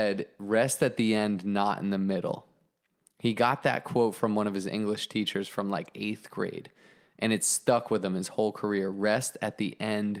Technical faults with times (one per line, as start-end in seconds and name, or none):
none